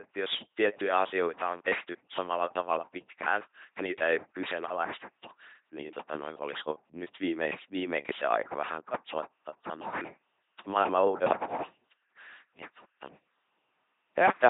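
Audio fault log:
Throughout: LPC-10 vocoder. The speech is heavily degraded into a buzzing, mechanical robot sound with nothing above 3.8 kHz, which fits a 2.4 kbit/s LPC-10 coder. Each instant is rebuilt as either a pulse-train buzz or noise through a ten-pole filter, discarding the natural excitation.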